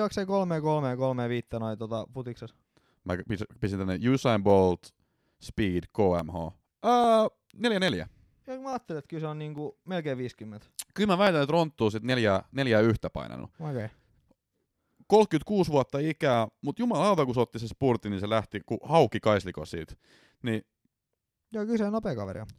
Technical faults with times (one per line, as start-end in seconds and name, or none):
0.29-22.25 clock drift buffer slips